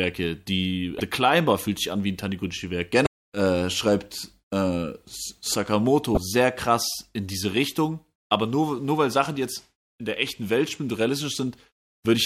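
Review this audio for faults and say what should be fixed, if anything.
Damaged data in a compressed stream causes three brief glitches in the speech, at 0.97, 3.03 and 6.14 s, each about 30 ms long. Corrupted bytes make the decoder misread frames and resynchronise, producing broadband vertical smears on a spectrogram and jagged discontinuities in the waveform. Prevent it with checksummed transport and verified file copies.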